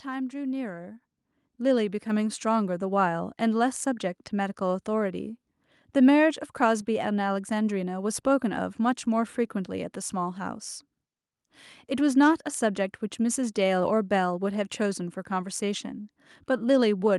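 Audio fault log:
1.02 s, microphone volume stepped up: the call software judged the microphone input too quiet and raised the device's input volume in a single step, adding about 7 dB of gain at once. Because the change happens before the sound is captured, the speech and the background noise jump up together, with no fade, so the whole sound suddenly becomes louder. The room noise rising by the same amount shows this was a gain change rather than a louder talker.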